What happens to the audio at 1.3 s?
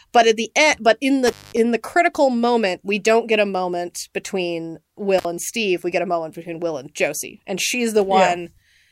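An intermittent contact, a loose cable or plug briefly opening, cuts the speech from 1.27 to 1.57 s, between "the end but in" and "the critical moment we". The line drops for about 200 ms, with crackle at the break and reconnection and faint hiss in the gap.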